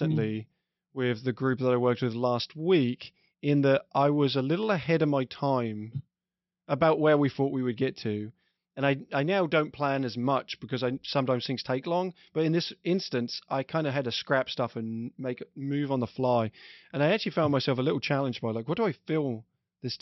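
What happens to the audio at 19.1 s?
Nothing goes wrong at 19.1 s: the speech carries on intact through that moment, with no dropout, click, distortion or other fault.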